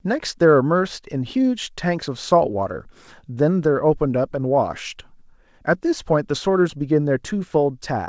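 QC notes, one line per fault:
No faults found in this speech; the call path shows only its expected coding character, with nothing above 8 kHz, which fits a G.722 wideband link at 64 kbps.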